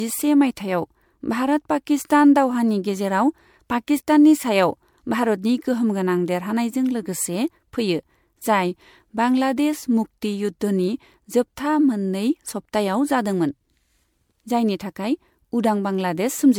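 Throughout the speech, generation loss leaves a swirly, hollow quality with blurred consonant attacks, likely from about five rounds of MP3 encoding at a rate consistent with 96 kbit/s. A spectrogram shows scattered spectral holes, smeared onsets, and nothing above 20 kHz.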